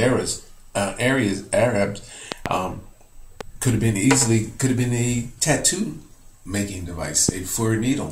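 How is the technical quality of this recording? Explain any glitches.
Four loud pops break into the recording. The likely cause is a sudden voltage step or spike entering the signal path, such as a plug, switch contact or static discharge. The circuitry downstream shapes each spike into a sharp thump, with the sound continuing underneath. From 2.32 to 2.48 s two pops arrive in quick succession, the strongest about 20 dB above the signal. Single, weaker pops follow at 3.41 to 3.43 s and 7.29 to 7.31 s, about 10 and 15 dB above the signal.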